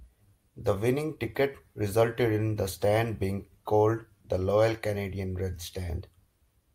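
Nowhere in the recording can any technical fault be heard.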